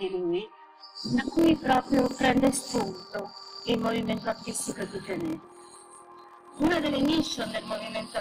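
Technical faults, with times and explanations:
1.34 s to 8.20 s, block size mismatch (padded): from 1.34 s to the end, a steady buzz at 41.7 Hz sits under the sound, and the audio plays at 0.889 times its normal speed with its timbre unchanged. Each block is written short and its remainder filled with silence, which fits 1024 samples written into blocks of about 1152. Unlike a sample-rate error, timbre holds. Unlike the truncated variant, the sound slows down instead of losing pieces.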